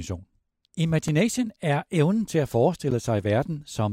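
A sharp tick at 1.08 s, just before "er evnen til at", and another tick at 2.91 s, right after "er evnen til at", are each a block of digital silence. The output buffer likely went unfilled, so the speech snaps to silence and back with no fade. The 2.9 ms and 11.6 ms gaps fit 128- and 512-sample buffers.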